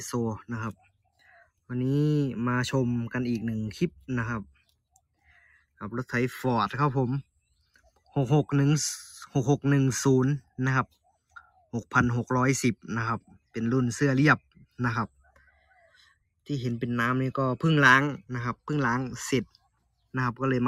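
A speech-oriented noise suppressor was left running on non-speech audio, treating steady and decaying parts as noise, so the level pumps through the whole clip, swinging by about 15 dB. Sound cut by the noise suppressor shows up at 0.73–1.7 s, 3.9–4.09 s, 4.44–5.81 s, 7.23–8.15 s, 10.41–11.92 s, 13.21–13.55 s, 14.39–16.49 s and 19.45–20.14 s, where sustained content and tails sink by up to about 22 dB while onsets survive.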